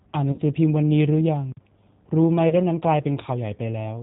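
The whole clip runs through a G.729 codec at 8 kbit/s, so nothing above 4 kHz survives. The speech is rebuilt from a filter, pitch predictor and a few pulses per frame, and it comes out plainly rough, thin and a bit synthetic.

At 0.32 to 0.41 s there's VoIP packet loss concealed by the speech codec. About 60 ms went missing, which fits three lost 20 ms packets. The decoder stretches the last sound into a buzzy tone or coloured noise that fades, and it stays weak briefly afterward. The same thing happens again at 2.49 to 2.55 s, but shorter, with around 20 ms lost, about one packet's worth.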